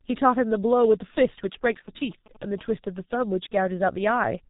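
Muffled, hoarse speech runs through the whole clip, with consonants smeared together and nothing audible above about 3.8 kHz. That combination is the signature of the G.723.1 codec, heavily damaging here: it codes the voice in 30 ms frames at a very low rate, consistent with about 6.3 kbit/s, so its model of the vocal tract updates too slowly to follow quick articulation and the top of the spectrum is simply discarded.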